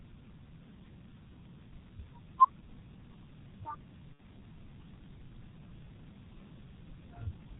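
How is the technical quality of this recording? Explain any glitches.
The recording is of poor technical quality, with heavy low-bitrate codec damage throughout and one packet-loss glitch.

Throughout, the G.723.1 codec shapes the speech. Its coarse frames and slow voice-model updates leave the sound muffled and hoarse, with smeared consonants, pointing to roughly 6.3 kbit/s. A spectrogram shows nothing above 4 kHz and blurred, blocky formant edges.

From 4.14 to 4.22 s comes VoIP packet loss concealed by the speech codec. About 60 ms of audio, fitting two 30 ms frames, went missing, and the decoder extended its last pitch and filter with falling gain. This produces a brief buzzy tone or coloured noise that fades, visible as a smooth decaying envelope.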